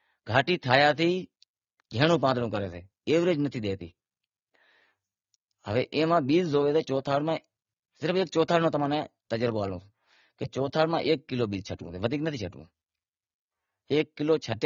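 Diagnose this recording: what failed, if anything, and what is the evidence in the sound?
Across the whole recording the speech sounds dull and smeared, with nothing above 6.9 kHz and a fizzy, warbling texture on sibilants and sustained vowels. The failure sits at the codec stage: the damage points to AAC compression, likely AAC-LC at a low bitrate, consistent with about 24 kbps. Short of bits, the encoder lowered its cut-off and quantised the remaining spectral lines coarsely against its hearing model, leaving gaps that surface as this swirling artefact.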